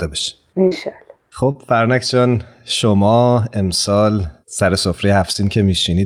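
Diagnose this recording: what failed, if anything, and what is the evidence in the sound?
Network stage: short concealed packet loss at 0.67, 1.51 and 5.33 s. The decoder extended preceding speech across 40, 40 and 20 ms gaps, leaving brief smears.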